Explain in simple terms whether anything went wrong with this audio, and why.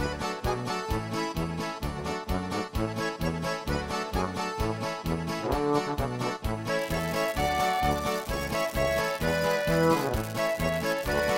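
From 6.79 s to the end of the clip, a steady crackle or fizz sits on top of the sound, and it carries on through the quiet gaps as well. That points to an unreliable data bit. One of the lines carrying the digital signal is marginal, so its bit is read wrongly in a random share of samples. Each mistake adds a click of identical size, and together they form this constant hiss-like crackle.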